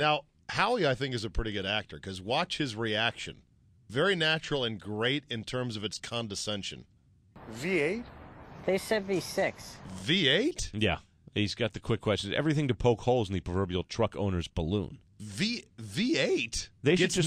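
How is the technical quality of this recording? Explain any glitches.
Nothing here trips up the ear: no glitches turn up anywhere in the recording, so there's nothing to explain.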